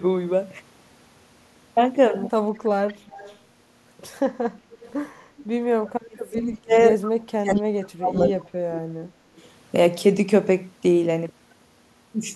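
Echo leak turns up at 2.88, 4.7, 5.37, 7.02, 7.56 and 9.37 s as faint copies of the speech trailing by 181 ms, well under the main level. They likely come from a far-end speakerphone whose echo canceller let some through. Between 5.75 and 6.75 s, and again from 7.35 to 9.24 s, you get speech suppressed in double talk: the talker sinks by up to about 35 dB, likely because the canceller couldn't separate voice from echo while both sides spoke.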